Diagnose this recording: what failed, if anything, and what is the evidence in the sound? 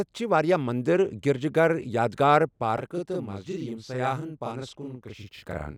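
From 2.78 s to the end, speech doubles into an equal-level slap: channel delay (doubling), one channel buffered 40 ms late before mono summing.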